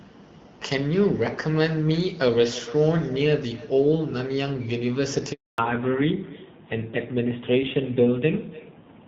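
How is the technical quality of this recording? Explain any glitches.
The recording has three call faults: an echo running throughout, a brief dropout at about 5.3 s, and a loss of bandwidth from then to the end.

Echo with no canceller runs through the whole clip. The far end's loudspeaker feeds its microphone and nothing subtracts it, so each phrase returns about a third of a second later, about 20 dB down and thinner. Unlike room reverberation, it is a distinct delayed copy rather than a smooth tail.

A handover gap runs from 5.32 s to 5.58 s. While the call switched networks, no speech frames arrived, so the sound cuts off within a few tens of milliseconds and stays silent for 260 ms. Unlike a brief packet loss, nothing fills or smooths the hole.

A fallback to narrowband follows from 5.58 s to the end. Before the switch, the wideband codec carried content past 6 kHz with only light coding roughness. 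Afterwards, nothing sounds above 4 kHz and the tone turns duller and grittier, which fits AMR narrowband around 7.4 kbit/s. Unlike a low-pass filter, it also adds coarse codec texture.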